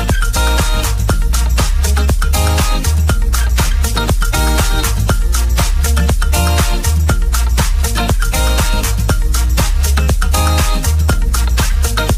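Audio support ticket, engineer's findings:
No audible faults found.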